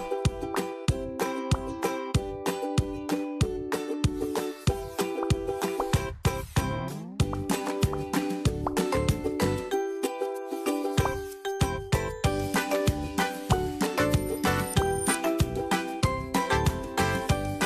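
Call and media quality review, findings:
No call or media quality findings to report for this clip.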